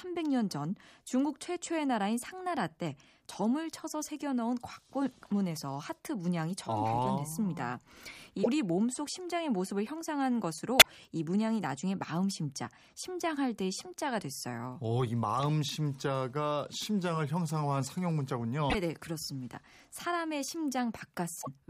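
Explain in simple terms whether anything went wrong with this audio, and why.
Damaged data in a compressed stream caused four brief glitches in this speech, at 8.40–8.47 s, 10.78–10.87 s, 18.67–18.75 s and 21.38–21.48 s. At each point, some of the stored or transmitted data was corrupted, so the decoder could not read those chunks properly and had to hunt for the next good one. What you hear is a short chirp or blip lasting under a tenth of a second.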